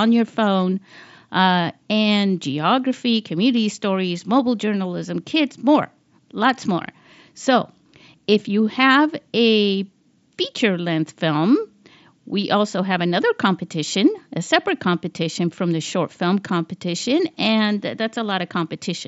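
Unconcealed Bluetooth headset packet loss at 6.86 s, just after "kids more lots more": a single lost headset frame leaves a sharp-edged 7.5 ms hole in the speech over the mSBC link.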